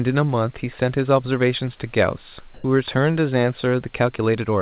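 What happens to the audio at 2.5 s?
From 2.54 to 2.64 s, comfort noise replaces the background. For those 100 ms the room sound turns steady and featureless, and its level shifts by about 5 dB. The likely cause is discontinuous transmission: the sender stopped sending, and the receiver filled the gap with synthetic noise.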